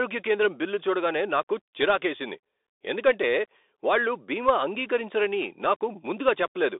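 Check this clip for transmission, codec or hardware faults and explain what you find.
One fault runs through the whole clip: Bluetooth CVSD headset codec. One-bit delta coding with an adaptive step, consistent with 64 kbps, limits sound to roughly 300 Hz to 3.7 kHz, with nothing above 3.8 kHz, and leaves audible granular hiss, scratchy sibilants and slope-overload distortion.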